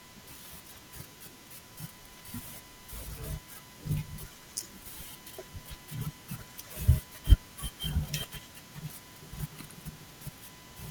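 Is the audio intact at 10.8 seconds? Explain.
No, USB whine runs through the whole clip, including 10.8 seconds. Current drawn in 1 ms bus frames leaks in through power or ground, leaving a steady 1 kHz whine roughly 25 dB below the speech.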